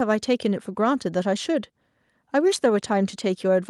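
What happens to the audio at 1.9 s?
Nothing goes wrong at 1.9 s; the speech runs through that point intact, with no dropout, click, distortion or other fault.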